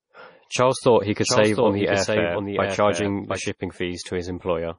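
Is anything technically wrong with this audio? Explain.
Yes. Throughout, the speech sounds dull and watery, with nothing above 10.5 kHz. This is likely low-bitrate audio saved at a high bitrate, fitting a 32 kbit/s MP3 later re-saved at 192 kbit/s.

From 1.23 to 3.49 s, just after "thought he", a second, full-band copy trails about 0.7 s behind, roughly 5 dB quieter, and starts and stops abruptly. This doubled audio track likely comes from two unsynchronised copies being mixed together.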